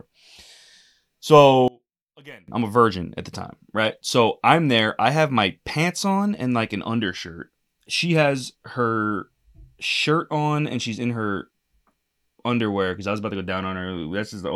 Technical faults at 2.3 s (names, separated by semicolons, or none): one channel inverted